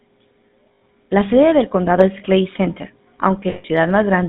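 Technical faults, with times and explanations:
throughout, GSM full-rate codec: the whole thing has that gravelly, buzzy grain you get from the old full-rate phone coder, and it's plainly audible. The coder rebuilds the voice from a vocal-tract filter fed with a sparse, regularly spaced pulse train, so the excitation comes out coarse and rasping. The line is squeezed to roughly 150 Hz to 3.7 kHz, which dulls the top end and thins the bottom. All of this fits a 13 kbps full-rate link.
3.5 to 3.65 s, lost GSM frames: for about 140 ms the speech stops moving and turns into a rough, metallic ring. That's the concealment at work. With no good data arriving, the decoder keeps reusing the settings from the last frame it trusted, so the sound hangs instead of just dropping out. The length fits roughly seven 20 ms frames going missing in a row.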